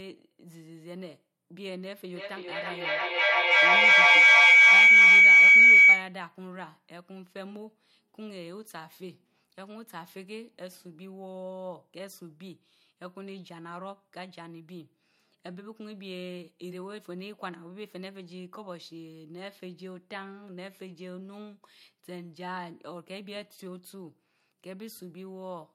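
From 2.13 s to 6.16 s there's a feedback howl: two devices sharing the room are looping mic to speaker, each pass gaining level, so it narrows to a tone around 2 kHz, with repeats about every 0.3 s and peaking about 24 dB over the speech.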